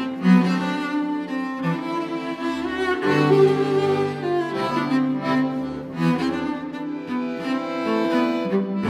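No technical faults can be heard anywhere in this audio.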